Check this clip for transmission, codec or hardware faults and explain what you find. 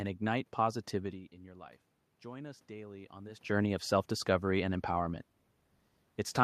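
One fault stands out: automatic gain rising. From 0.97 to 3.50 s, the input level falls by about 17 dB as the talker moves away. The gain control responds by slowly adding about 4 dB. Voice and room noise swell together, gradually, without restoring full level.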